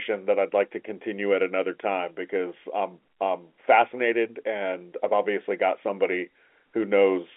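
No technical faults are audible.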